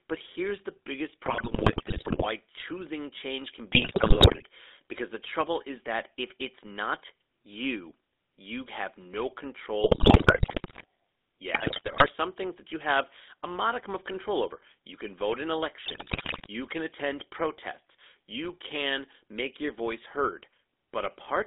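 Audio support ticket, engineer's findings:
GSM full-rate codec across the whole call, consistent with the 13 kbps full-rate path. Coarse pulse excitation and vocal-tract modelling leave the speech buzzy and gravelly, plainly audible. Band limited to 300 Hz to 3.7 kHz, so a thin, boxy line sound.

GSM bit errors on the radio link at 1.26 to 2.26 s, 3.72 to 4.43 s, 9.84 to 10.85 s, 11.54 to 12.09 s and 15.86 to 16.48 s. Corrupted filter, pitch and gain parameters reach the decoder, causing squawks, pops and gargling bursts. Worst near 9.8 s and 15.9 s.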